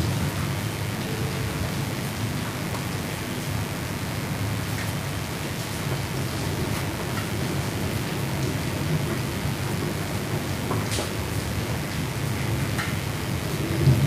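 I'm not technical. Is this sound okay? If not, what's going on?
No. A steady, raspy buzz runs underneath the whole recording. That is mains buzz: sharp electrical spikes from the 50 Hz power supply leaking into the audio.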